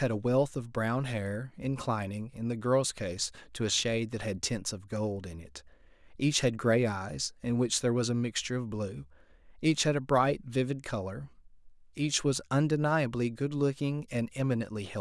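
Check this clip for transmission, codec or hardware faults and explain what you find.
Nothing faulty turns up anywhere in this speech recording. There is no moment in it where a fault can be pointed to.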